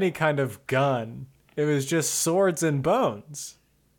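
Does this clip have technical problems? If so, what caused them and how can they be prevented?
No, there's nothing technically wrong to hear in this bit of speech, so there's nothing to fix or guard against here.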